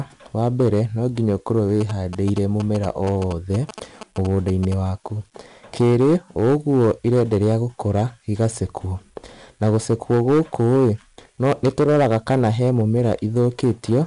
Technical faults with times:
0.00-14.06 hard clipping
0.00-14.06 4-bit ADPCM compression
1.81-4.74 GSM signalling bursts

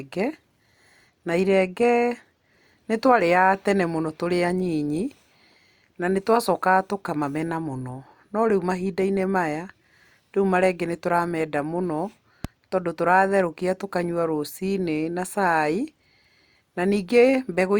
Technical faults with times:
12.44-12.47 loud pop

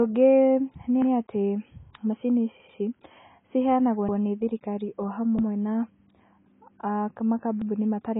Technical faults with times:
0.00-8.20 AAC compression
4.09-4.18 repeated buffer
5.39-5.48 repeated buffer

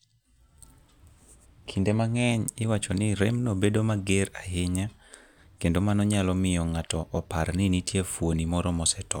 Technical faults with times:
none

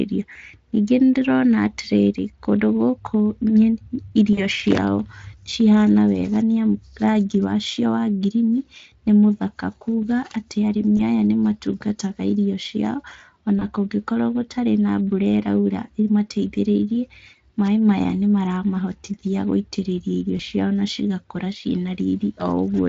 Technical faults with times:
0.33-0.36 VoIP packet loss concealed by the speech codec
4.33-4.46 VoIP packet loss concealed by the speech codec
10.97-11.00 VoIP packet loss concealed by the speech codec
13.59-13.64 VoIP packet loss concealed by the speech codec
20.37-20.41 VoIP packet loss concealed by the speech codec

